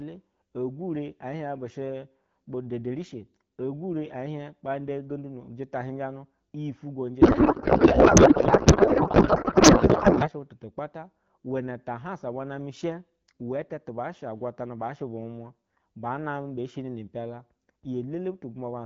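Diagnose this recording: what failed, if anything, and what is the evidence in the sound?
The failure is a codec payload misread at the codec stage, from 7.21 to 10.30 s. The clear HD Voice speech turns to garbled noise and warble. On a spectrogram the harmonic bands dissolve into smeared energy, which suggests octet-aligned AMR being read as bandwidth-efficient.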